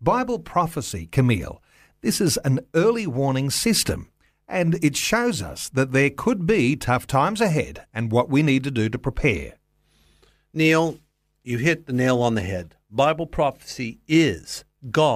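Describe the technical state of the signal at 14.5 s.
At 14.5 s the speech signal is intact, with no dropout, clipping, distortion or other fault audible at that point.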